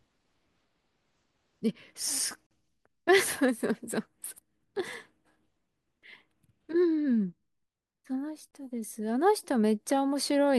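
Gaps at joins of encoded pieces cut the speech from 2.47 to 2.51 s (about 42 ms) and from 8.51 to 8.53 s (24 ms), six seconds apart. Separately encoded pieces were joined with their leading delay and end padding left in, so brief gaps with smeared edges interrupt the speech before it resumes where it stopped.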